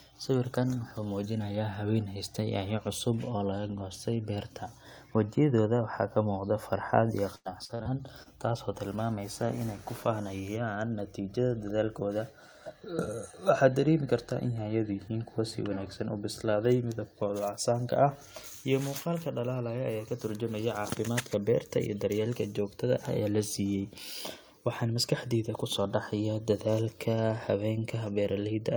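Repeated packet loss (robotic sound) runs from 7.35 to 7.87 s: four gaps, the longest 97 ms, are patched by extending earlier speech, leaving choppy stretches with pieces missing. Short concealed packet loss follows at 8.23 to 8.27 s, where about 26 ms is filled from the preceding sound, heard as a brief smear.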